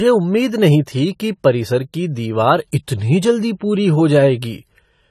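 From start to finish, the speech carries plainly audible damage, likely from AAC compression. Nothing is present above 14 kHz, so the top end sounds dull. The coder starved bands of detail, which fits a low bitrate near 32 kbps. Sibilants sound smeared and fizzy.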